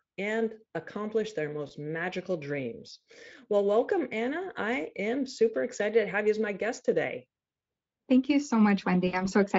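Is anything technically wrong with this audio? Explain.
Yes. There is VoIP packet loss concealed by the speech codec, heard twice in this speech. The first is brief, at 1.67 to 1.73 s. About 20 ms of audio is missing, which fits one lost frame. The second is longer, at 9.07 to 9.29 s. About 60 ms is missing, which fits three frames. The decoder fills each gap by extending its last pitch and filter while lowering the gain. The sound smears into a fading buzzy tone or coloured noise. It stays weak briefly after packets resume.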